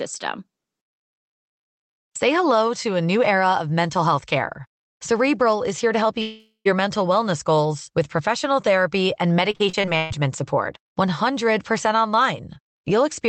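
Right after "is here to help", from 6.21 to 6.67 s, there's a long network dropout: the last bit of speech smears on as a fading buzz, then drops to near silence for roughly a tenth of a second. About 0.44 s of audio is simply gone, likely because packets never arrived.

Then after "with professional therapy and", between 9.51 and 10.12 s, repeated packet loss gives that choppy, robotic sound: six quick holes, the longest about 131 ms, each patched by stretching what came before, so close to half that stretch is filler.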